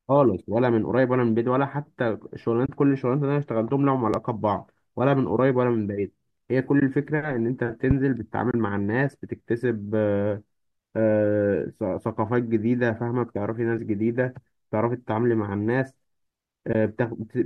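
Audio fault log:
2.66–2.69, 6.80–6.82, 8.51–8.54, 13.78, 16.73–16.75 s: AAC frame loss with muting. Short silent gaps of 10 to 30 ms, consistent with 10 ms low-delay frames zeroed, fade out and back in.
4.14–4.16, 7.91–7.93 s: loud pop. Single sharp pops about 10 dB and 15 dB above the speech, likely a voltage transient. The speech continues beneath each pop.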